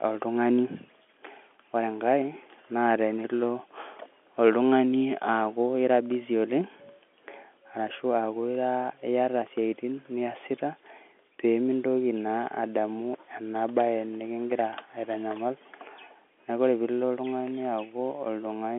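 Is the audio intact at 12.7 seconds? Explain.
Yes, at 12.7 seconds the speech runs intact, with only the narrow telephone band of its G.711 coding and nothing above about 3.8 kHz.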